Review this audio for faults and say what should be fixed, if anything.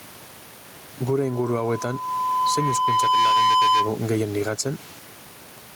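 Throughout the speech, with the room noise normally about 28 dB below the speech, the gain swings by roughly 10 dB and squashes the dynamics. This gain pumping is likely caused by input gain set far too high, with a fast limiter clamping each peak. Lowering the microphone gain so the limiter rarely engages would prevent it.

From 1.21 s to 3.97 s a single 1 kHz tone builds over about two seconds into a squeal roughly 5 dB above the speech. This is loudspeaker feedback squeal: the microphone picks up its own loudspeaker, and at 1 kHz the loop gain exceeds one. Moving the microphone away from the loudspeaker, or notching out 1 kHz, would prevent it.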